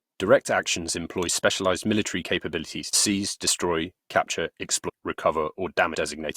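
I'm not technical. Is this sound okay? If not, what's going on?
No, there are two spots where the speech jumps ahead. This is called compressed frames skipped: small chunks of the stored audio were lost or rejected as damaged, so playback leaps past them. At 2.93 s, right after "employ specialized military capabilities", roughly 0.07 seconds vanishes. At 4.88 to 4.90 s, after "seize destroy capture", a longer piece, roughly 0.15 seconds, is gone. Unlike a dropout, there's no silent gap.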